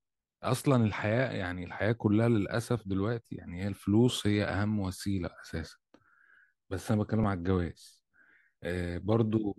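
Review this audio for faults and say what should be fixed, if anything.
At 7.23 s the speech has a repeated buffer. New audio arrived late, so the device played its last 5.33 ms block one extra time. That length fits a 256-sample buffer. The hard joins give a short click, and about 5 ms of sound is lost. To prevent it, use a larger playback buffer or give the audio thread higher priority so data always arrives in time.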